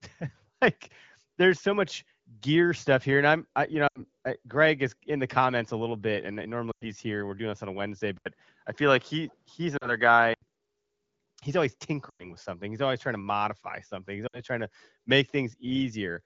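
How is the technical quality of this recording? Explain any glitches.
Rough in places: the call comes through an AMR wideband (HD Voice) link that sounds fairly clean on its own, but there are five dropouts and a stretch where the input itself changes.

Lost AMR speech frames show up at 3.88 to 4.00 s just after "I'm I you know", 6.71 to 6.84 s after "a little bit and", 9.77 to 9.92 s, 12.09 to 12.32 s right before "with something", and 14.27 to 14.41 s. Each gap runs 40 to 100 ms. Radio errors corrupted those frames, so the decoder kept replaying the last good pitch and vocal tract settings at shrinking gain. You hear the voice drop quickly to near silence, then return a bit thin or gritty.

From 8.18 to 10.42 s the input switched to a poorer device, most likely a changeover to another mic or a headset's call profile. It starts with an 80 ms hole, and then the tone goes duller and boxier because nothing comes through above 6.6 kHz. 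The level shifts by roughly five dB, and new background noise sits well below the voice. The dropout at 9.77 s falls inside this stretch.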